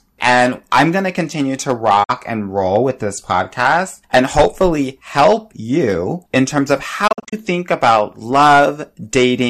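Throughout the speech, hard clipping adds a harsh fuzz on the loudest syllables. The peaks are driven about 11 dB past full scale and cut flat, unlike softer limiter squash. At 2.03 s, a digital broadcast dropout fades out over 8 ms and mutes for 48 ms, which fits two lost frames. Clean silence, not concealment warble, marks it. From 7.07 to 7.33 s, a second dropout breaks into several short holes across 240 ms, each no longer than 48 ms.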